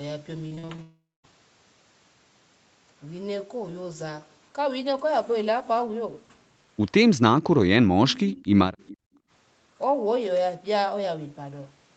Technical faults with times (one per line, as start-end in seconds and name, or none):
0.47-0.80 repeated packet loss (robotic sound)
0.82-1.25 long network dropout
7.95-8.75 speech suppressed in double talk
8.80-8.97 echo leak
9.03-9.30 background gated by the echo canceller